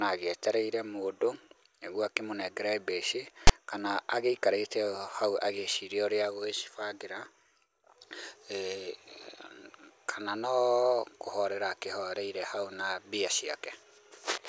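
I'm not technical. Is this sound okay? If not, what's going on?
No. At 3.47 to 3.50 s, just before "kana agĩikarĩte", there is a short, harsh burst of static with abrupt edges. This is file tags played as audio: the file contains a block of text information, such as a title or other labels, and the player read it as if it were part of the recording. Because text isn't sound, it comes out as a loud rasp leaning toward one side rather than as anything natural.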